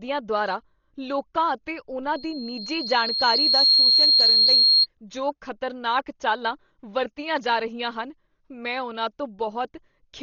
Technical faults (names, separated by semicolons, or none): Dolby Digital compression; loudspeaker feedback squeal